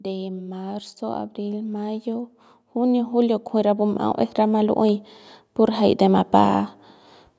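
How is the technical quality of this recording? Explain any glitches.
The recording has one clear gain fault. From 0.05 s to 6.71 s there is automatic gain rising: the automatic gain control judged the input too quiet and raised its gain by about 14 dB, so speech and background noise swell together steadily. The call microphone processing trims the lowest bass and leaves nothing above 8 kHz, as expected.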